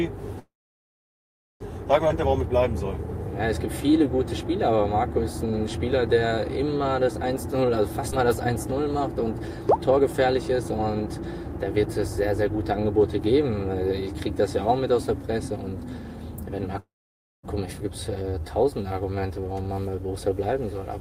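From 0.39 to 1.62 s the sound stops and a gap of 1.21 s is inserted. A brief decaying tail is followed by about 1.1 s of silence, then playback resumes where it left off with nothing lost. This is a call audio freeze, likely caused by delayed packets draining the jitter buffer so that the receiver could only stretch the last sound. Unlike a skip, it adds time instead of removing it.

At 2.08 s comes a skip ahead. Roughly 0.7 s of audio is missing, and the two sides are joined by a fill of only 13 ms. There is no pause, just an abrupt jump forward in content. That jump, with no hole in the timeline, is what separates it from the freeze before it.

From 3.86 to 7.66 s a jitter buffer slow-down repeats single pitch periods and fragments of pauses to rebuild the reserve. This adds 158 ms, so the audio plays at 96% speed. The pitch stays the same while sounds are drawn out, which distinguishes this from a tape-style slowdown that would lower the pitch.

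From 7.81 to 11.77 s the opposite correction follows. A jitter buffer speed-up trims short pitch-period pieces, roughly 0.1 s in total, and the audio runs at 102% speed, barely noticeable and at unchanged pitch. Inside this stretch, at 8.10 s, a second skip ahead drops roughly 0.15 s in a single clean jump with a 10 ms join. A second speed-up from 15.48 to 16.75 s is far more audible at 109%: about 0.15 s is removed in little over a second, and it sounds hurried. Because the speed-ups shave many tiny pieces rather than making one cut, they sound rushed rather than jumpy.

From 16.80 to 17.45 s a second call audio freeze inserts 0.64 s, with about 0.55 s of it silent, and the sound again resumes intact. At 17.79 s a skip ahead removes roughly 0.5 s with a 9 ms join. Finally, a slow-down from 18.23 to 20.54 s adds 236 ms and runs at 90%, giving a clear drag at steady pitch.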